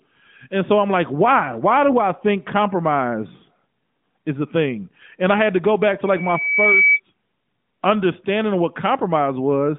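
From 6.05 s to 7.00 s a loudspeaker feedback squeal rises out of the speech: a single tone at 2.3 kHz, picked up by the microphone from the loudspeaker it feeds and looping back with more than unity gain. It swells over roughly 0.7 s and settles a few dB above the speech. On a spectrogram it is a bright horizontal line, sitting within the narrowband line's ceiling near 3.7 kHz. The waveform envelope grows steadily, then holds until 7.00 s.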